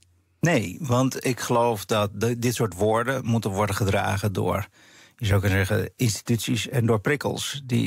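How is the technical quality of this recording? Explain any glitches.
A single glitch stands out in this speech recording: one hard clipping event.

At 1.00 s, just before "ik geloof dat", a peak in the speech is momentarily squared off, heard as a brief crackle rather than a sustained fuzz. The signal at that instant reached the limit of a stage in the recording chain, with an overdrive of about 0 dB. Any excess beyond that ceiling was cut flat, and that flat top adds high harmonics that were not in the original sound.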